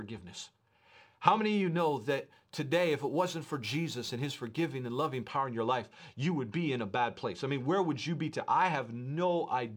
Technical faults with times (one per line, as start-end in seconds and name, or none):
1.78-5.29 crude rate conversion